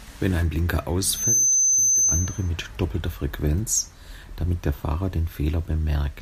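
From 1.09 to 2.50 s a loudspeaker feedback squeal takes over: the mic hears its own speaker, and a 6.2 kHz tone swells within a fraction of a second to sit a few dB above the speech.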